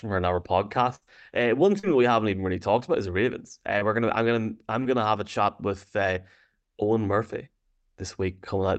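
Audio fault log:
0.95–1.03 s: burst of packet loss. About 60 ms of audio never arrived in time, so the receiver stretched the last sound and faded it down across the gap. Playback then picks up later, with that stretch of audio gone and the brief stretched, fading fill in its place.
1.79–1.85 s, 3.79–3.83 s, 4.83–4.87 s: short concealed packet loss. Gaps of about 40 ms before "that we haven't even", then about 20 ms before "we're gonna I'm gonna" and between "gonna I'm gonna I'm" and "have a chat with". Each is patched by extending the preceding sound before blending back, heard as a quick smear. The Opus call path caps the audio near 8 kHz, at a 40 kbps setting.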